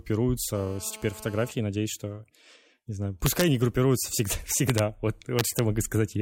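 A nearby 2G handset on an active call was transmitting its radio bursts 217 times a second, and the audio circuitry in this speech recording rectified those pulses into the signal path. The result is a GSM phone buzz from 0.55 to 1.52 s: a hard, raspy tone at 217 Hz, rich in harmonics and unrelated to the speech. It sits about 21 dB below the voice and holds nearly steady, as expected from a call rather than a data transfer. Separately, a sum or gain stage exceeded the largest value its integer format could hold and, instead of being limited, wrapped around to the opposite sign. This integer overflow flips each offending peak across the full range. It appears as violent, sharp cracks on the loud moments at 3.26 to 3.43 s, 4.70 to 4.79 s and 5.39 to 5.59 s, far harsher than ordinary clipping would sound.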